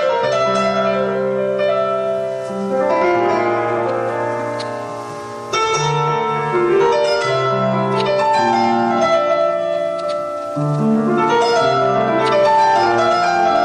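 Hard clipping runs throughout. The signal overdrives by about 3 dB, so around one percent of samples are cut flat, adding a brief crackle on loud moments.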